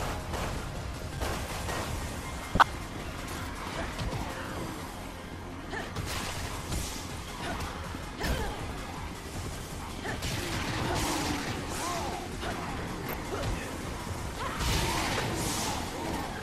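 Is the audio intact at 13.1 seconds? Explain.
No. From 13.06 to 13.14 s there is DAB burbling: bit errors slipping past error correction corrupt the samples in a few consecutive frames, so short blips of noise appear in single sub-bands.

Underneath, the dull, gurgling, granular texture of MP2 compression is plainly audible, likely from MPEG Layer II coding at a low bitrate, around 80 kbps. Starved of bits, upper sub-bands drop out and flicker while the remaining bands are coarsely quantised.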